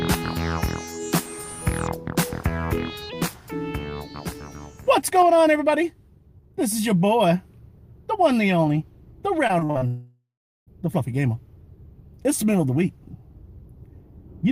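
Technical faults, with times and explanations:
9.47–9.83 s, repeated packet loss (robotic sound): five short holes, longest 40 ms, patched by repeating prior audio, giving choppy sound; the spectrogram shows smeared, stuttering vertical bands.
9.87–10.69 s, long network dropout: a fading buzz, then about 0.39 s of silence, likely from roughly 0.8 s of audio never arriving; the waveform tapers into a flat gap.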